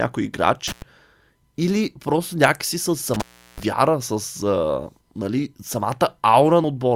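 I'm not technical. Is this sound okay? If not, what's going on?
No. There are two problems. First, an intermittent contact: a loose cable or plug briefly lost connection, so the speech cuts out with crackly edges at 0.68–0.82 s, and again for about a third of a second at 3.14–3.63 s, between "или просто някакси с" and "вяра с а нали". Second, compressed frames skipped: near the end, a couple of chunks of the compressed file were missing or damaged. At 6.64 s the speech jumps ahead by roughly 70 ms, which fits two 32 ms frames.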